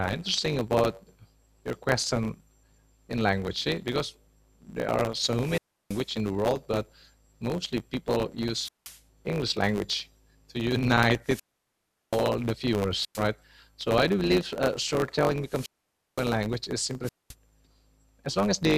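Speech with two things going on. A steady 100 Hz buzz runs the whole way through, and everything plays about 1.07 times fast while the pitch stays roughly normal. That's a truncated block size mismatch: one stage writes blocks longer than the next reads, which fits a 512-sample write block, and the tail of each block gets dropped. On top of that there are six wireless microphone squelch dropouts, where hiss swells, the receiver mutes, and the sound comes back. They fall at 5.33–6.11 s (mute about 0.35 s), 8.52–9.02 s (0.19 s), 11.23–12.28 s (0.78 s), 12.97–13.24 s (0.11 s), 15.43–16.37 s (0.55 s) and 17.03–17.35 s (0.23 s).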